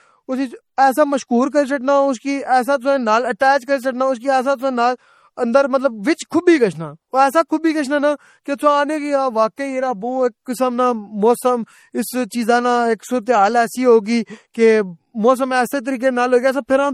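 Throughout the speech, nothing sounds above 16.2 kHz, and the swirly, smeared detail of a low-bitrate MP3 is present. This is likely low-bitrate audio saved at a high bitrate: unlike a genuine high-bitrate encode, the damage from an earlier pass near 48 kbit/s remains.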